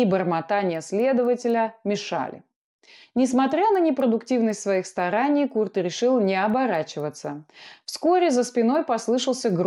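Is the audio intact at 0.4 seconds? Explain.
No. At 0.4 s the speech carries the fault of a resampler restarted on every block, which runs through the whole clip. Each 250 ms block was converted on its own, likely upsampling from 24 kHz to 48 kHz, so the edges lack their true neighbouring samples. That leaves faint ticks at 4 per second, heard where there is signal. On a spectrogram they show as thin vertical broadband lines every 250 ms. The waveform shows small steps at those boundaries.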